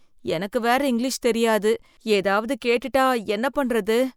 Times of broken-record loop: none

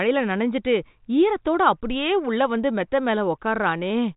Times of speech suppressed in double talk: none

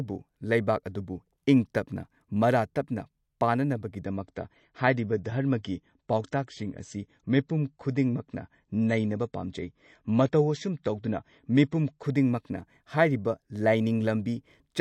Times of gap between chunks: none

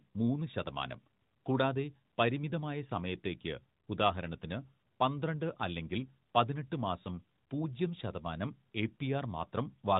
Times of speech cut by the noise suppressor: none

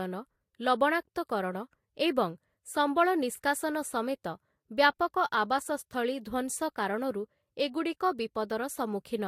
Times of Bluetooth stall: none

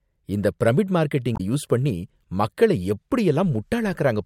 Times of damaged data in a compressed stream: 1.33-1.40, 3.93-3.95

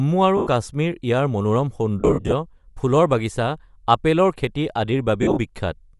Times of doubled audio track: none

